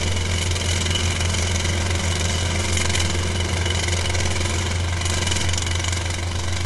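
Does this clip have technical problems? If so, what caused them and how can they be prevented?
Yes. Throughout, the sound is grainy and rough with nothing above 11.6 kHz, likely low-delay AAC compression (AAC-ELD) at something like 32 kbps, whose coarse coding at that low bitrate adds noise between the harmonics. Giving the encoder a higher bitrate would prevent it.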